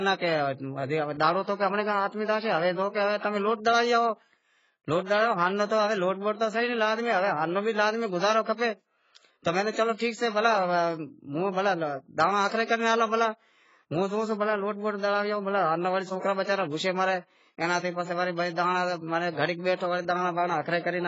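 Throughout, the speech is dull and smeared with nothing above 7.6 kHz, the sound of heavy AAC compression, likely AAC-LC at a bitrate around 16 kbps. Pre-echo occurs at 9.71–9.77 s (56 ms), 12.48–12.52 s and 12.65–12.69 s: quantisation noise spread across each transform block is heard as a brief hiss just before a sharp attack.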